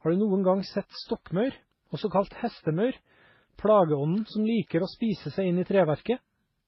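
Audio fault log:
throughout: transcoding between lossy codecs. The speech has likely been encoded several times in a row. The sound suggests a low-rate MP3 stage, then WMA, then HE-AAC, with each coder spending bits on the previous one's damage and adding artefacts of its own. Nothing sounds above 5.7 kHz, the lowest cut-off in the chain, so consonants are dulled. The different artefacts of each stage are heard together.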